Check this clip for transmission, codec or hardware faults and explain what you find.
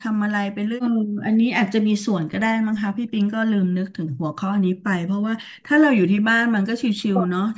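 The clip has echo-canceller faults of three kinds. The audio comes through call microphone processing, which can be heard as nothing above 8 kHz.

Background gated by the echo canceller occurs at 0.98 to 1.24 s, 4.12 to 4.23 s, 4.73 to 4.84 s and 5.49 to 5.61 s. Each time, the canceller clamped the microphone while the loudspeaker played. The room sound drops by about 32 to 34 dB, then returns.

An echo leak appears at 4.07 to 4.11 s. A very faint copy of the sound arrives 146 ms late, far below the main signal. The likely cause is a loudspeaker echo that the far side's canceller did not fully remove.

Speech suppressed in double talk comes at 7.08 to 7.3 s. The speech dips moderately for about 0.2 s. Both sides were probably talking at once. The canceller could not tell the talker from the echo, so it turned everything down.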